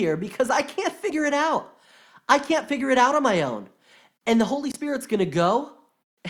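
At about 4.72 s the speech jumps forward and the next 44 ms or so come out garbled before things settle. That's the signature of a broken MP3 bit reservoir, which is the likely cause here. A chunk of frames went missing, so the frames after the gap reached back into the reservoir for borrowed bits and decoded someone else's bytes. The damage spans under two frames, which fits frames of roughly 26 ms.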